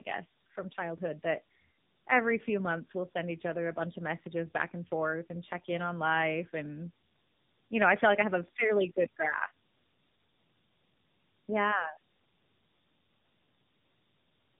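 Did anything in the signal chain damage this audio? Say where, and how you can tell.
Yes, tandem speech coding at the codec stage, throughout. Nothing lies above 3.7 kHz. Speech sounds rough and warbly, which fits two narrowband coders stacked.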